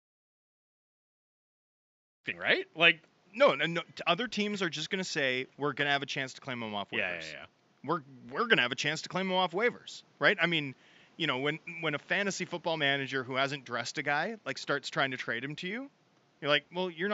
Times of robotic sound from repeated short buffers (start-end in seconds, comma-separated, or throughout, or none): none